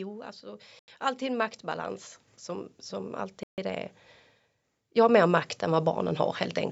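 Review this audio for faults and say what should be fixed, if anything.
Automatic gain rising occurs twice: from 0.4 to 3.94 s the level climbs by about 9 dB, and from 4.80 to 6.04 s by about 5 dB. The gain control judged the speech too quiet and raised it gradually, so speech and background noise swell together. On a waveform the envelope widens steadily. On a spectrogram the noise floor brightens along with the speech. Fix the microphone level at a sensible setting and turn off automatic gain in the recording or call software.

Two full dropouts cut the sound to silence, from 0.79 to 0.88 s (88 ms) and from 3.43 to 3.58 s (145 ms). The likely cause is a Bluetooth stall: interference held up packets, the headphone buffer ran dry, and playback paused until the resent data arrived. The waveform shows flat gaps, and the spectrogram shows blank vertical bands across every frequency, which sit below the usual 8 kHz ceiling of call processing. 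Shorten the distance to the phone, remove sources of 2.4 GHz interference, or use a wired connection.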